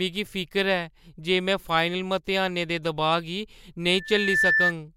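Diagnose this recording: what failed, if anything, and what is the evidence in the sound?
Loudspeaker feedback squeal from 3.91 to 4.73 s in this speech: a mic-to-speaker loop. A 1.8 kHz tone builds over about half a second to roughly 5 dB above the speech, a bright horizontal line on a spectrogram.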